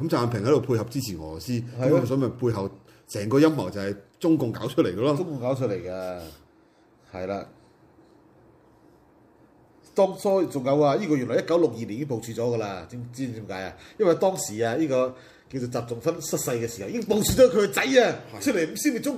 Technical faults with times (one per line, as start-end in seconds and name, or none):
2.52 corrupt frame decoded